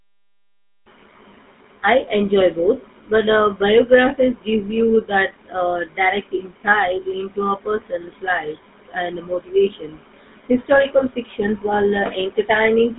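GSM full-rate codec damage runs throughout the speech, plainly audible as a buzzy, gravelly roughness. The codec rebuilds the voice from a vocal-tract model fed by sparse, regularly spaced excitation pulses. The line is band-limited to roughly 200 Hz to 3.7 kHz, nothing above 3.8 kHz, consistent with a 13 kbps stream.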